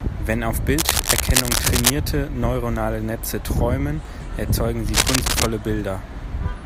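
Cable scratch noise from 0.78 to 1.90 s and 4.89 to 5.46 s: dense, ragged rustling about as loud as the speech, likely a worn cable or connector being moved.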